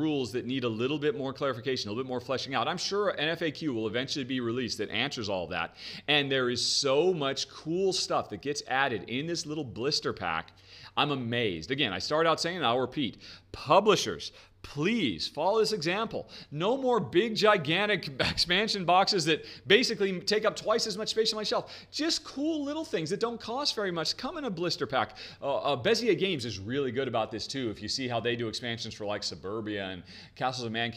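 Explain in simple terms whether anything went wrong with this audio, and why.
Nothing went wrong with this audio that a listener could pick out. At no point does the sound do anything that would point to a technical problem in how it was recorded or delivered.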